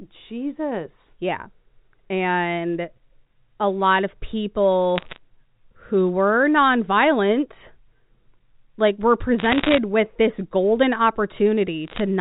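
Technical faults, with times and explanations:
4.98–5.18 s, 9.39–9.78 s (between "like we're" and "with this golden") and 11.88–12.00 s: bit errors on the digital phone line. Roughly 0.7 to 1 percent of bits flip in each burst, corrupting single A-law samples. Hits on sign or high-order bits become sharp ticks, heard as brief crackle over otherwise intact speech.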